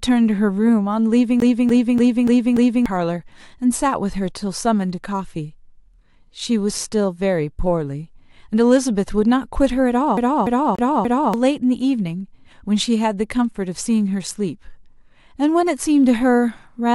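A scratch on the disc is making the laser jump back one track at the same point on every turn, so the CD is stuck on one turn. From 1.40 to 2.86 s the same 0.29 s slice of speech plays five times, and from 10.17 to 11.34 s a 0.29 s slice repeats four times. Each jump brings a brief mute, giving the fast, even stutter of a skipping CD.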